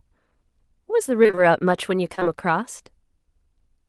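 Between 1.23 and 1.39 s, repeated packet loss (robotic sound) strikes: four separate holes open in the incoming stream, the longest 23 ms, and the receiver patches each by extending the preceding sound before the next dropout arrives. Nearly half of that 0.16 s stretch is filled-in material rather than real speech, so the passage turns choppy, with fragments missing.

From 2.15 to 2.27 s, three short concealed packet losses follow back to back, starting at 2.15, 2.20 and 2.23 s, each about 20 ms of audio failing to reach the decoder in time. The concealment carries the last sound forward, from its pitch when voiced or as shaped noise when not, and then crossfades back in, leaving a brief smear and wobble where a short consonant can drop out. The rest of the chain sounds like an Opus call path with its band limit near 12 kHz.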